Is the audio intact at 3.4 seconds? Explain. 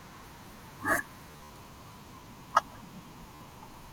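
No. From 3.35 to 3.41 s the speech has a Bluetooth stutter: about 53 ms of audio arrived late or not at all, so the receiver kept replaying its last short buffer until fresh data came. It sounds like a brief mechanical buzz, and then the speech resumes as though it had played on through the gap. On a waveform, a tiny slice is copied several times in a row. A spectrogram shows stuttering vertical bands across that span.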